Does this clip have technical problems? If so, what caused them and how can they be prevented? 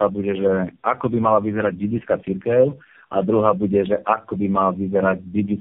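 Yes. Tandem speech coding runs through the whole clip: nothing reaches above 3.4 kHz, and the speech sounds rough, muffled and warbly. That fits three low-rate speech codecs in a row, likely G.729A then AMR-NB twice, each re-encoding the previous one's errors. It can be prevented by carrying the call end to end in one codec, using transcoder-free operation or a wideband path across network borders.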